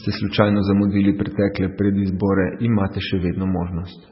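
Throughout the speech there is a hard treble ceiling with nothing above about 5.6 kHz, plus watery, swirling artefacts and smeared consonant onsets. The likely cause is heavy MP3 compression at a very low bitrate, which fits roughly 16 kbps, where the encoder cuts the top band and drops weak frequency lines that flicker between frames.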